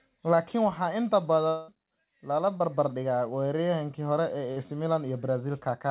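From 1.48 to 1.70 s, between "waxaa inta" and "lala barbar", the speech breaks off in what is likely a long network dropout. For about 0.2 s the receiver keeps extending the last sound as a fading buzz or hiss that fills the whole gap without dropping to silence. When the speech returns, that stretch is simply gone. The fill lasts far longer than a brief smear, and real content is lost, which sets this apart from a concealed packet loss.

Two short concealed packet losses follow, at 2.58 to 2.62 s (20 ms) and at 4.52 to 4.58 s (40 ms). In each, a few hundredths of a second failed to reach the decoder in time. The receiver bridged the hole with a continuation of the preceding sound and blended back into the real signal. Each one sounds like a quick smear or wobble. Over the G.711 mu-law call path, nothing in the audio reaches above 4 kHz.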